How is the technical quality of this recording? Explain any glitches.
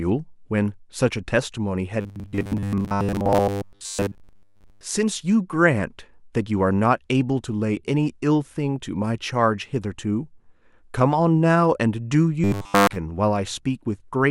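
The recording has two episodes of robotic sound from repeated short buffers, from 2.01 to 4.84 s and again from 12.44 to 12.96 s. In both, the speech turns into a rigid, metallic buzz at a fixed 100 Hz that still roughly tracks the words. The likely cause is audio arriving too seldom, so a roughly 10 ms snippet is replayed to fill the gaps and most of the real signal is skipped. On a spectrogram this appears as flat, evenly spaced harmonics every 100 Hz. The waveform shows identical cycles repeating every 10 ms.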